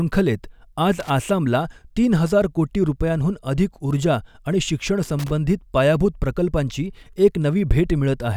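At 1.00 to 1.10 s the speech breaks into a short, irregular burst of scratchy crackle. It returns at 5.19 to 5.30 s. This is loose connector crackle. A worn or dirty contact keeps making and breaking, chopping the signal into rough fragments.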